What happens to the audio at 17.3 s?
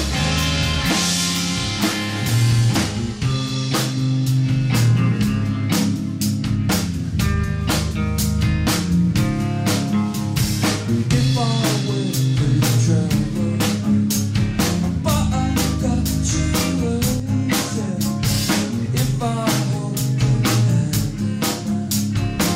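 Between 17.20 and 17.29 s the level falls abruptly by about 6 dB for 90 ms, then snaps back. The likely cause is one channel dropping out: with one stereo side lost, the mono sum retains only half of the shared content.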